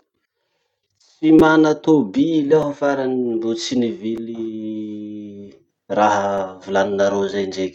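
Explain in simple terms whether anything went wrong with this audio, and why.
Four tiny glitches interrupt the speech, at 1.39, 2.62, 4.17 and 6.38 seconds. Each is a repeated buffer: new sound arrived late, so the player replayed its last sliver of roughly 5 ms. At 1.39 s that sliver played three extra times, and at the others once. Because each piece is so short, the repeats sound like a small click or buzz rather than an audible stutter. Unlike a dropout, no silence appears, just the same fragment looping.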